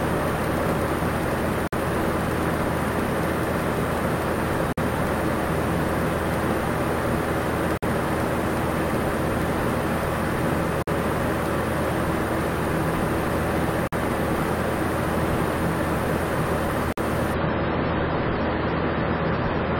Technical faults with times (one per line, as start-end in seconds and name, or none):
1.67-1.72 gap between chunks
4.72-4.77 gap between chunks
7.77-7.82 gap between chunks
10.82-10.87 gap between chunks
13.87-13.92 gap between chunks
16.92-16.97 gap between chunks
17.34-19.79 adaptive stream at a lower bitrate